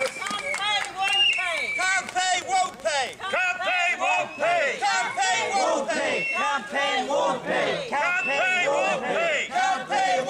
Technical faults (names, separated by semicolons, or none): train of clicks